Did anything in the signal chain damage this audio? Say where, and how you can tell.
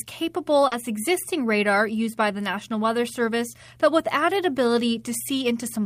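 Yes. In the network stage, short concealed packet loss at 0.67 to 0.73 s left about 40 ms missing, just before "existing radar used by". The decoder continued the preceding sound to fill the gap and then blended back, so the audio briefly smears or wobbles.

Also in the network stage, a lost packet rebuilt from error correction covers 0.71 to 0.73 s, still before "existing radar used by". One packet's 20 ms was decoded from the low-bitrate copy carried in the next packet, so that stretch sounds rougher and noisier without any gap.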